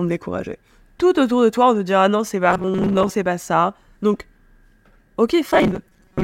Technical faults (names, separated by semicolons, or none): robotic sound from repeated short buffers